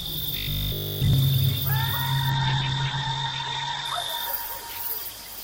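From 0.37 to 1.13 s this everyday-sound clip turns into a rigid, metallic 50 Hz buzz, robotic sound from repeated short buffers, likely because audio arrived too seldom and essentially every gap was filled by replaying a 20 ms chunk. From 2.3 s to the end the sound grows muffled and rough as the top end collapses from 20 kHz to 8 kHz, a call bitrate drop whose coarseness fits an encoder cut from about 96 kbps to 10 kbps, sitting at its worst for about 1.6 s.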